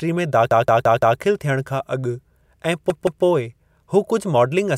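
From 0.51 to 1.20 s the speech stutters, one 171 ms piece sounding five times with a hard join at each repeat, then three times from 2.90 to 3.24 s. This is a repeated buffer: new audio arrived late, so the device replayed its last buffer.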